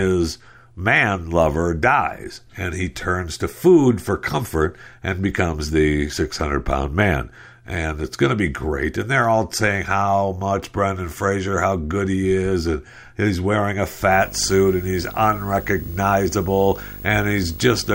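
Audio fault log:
14.11 to 17.94 s, video or display buzz: just after "and he's wearing a", a buzz at 50 Hz appears under the speech and holds to the end of the clip, with hash above it and a very high tone at 15.6 kHz. A screen or video cable is coupling into the audio path. The buzz follows the picture's field rate, the high tone is the line rate leaking through, and the whole interference sits roughly 15 dB below the speech.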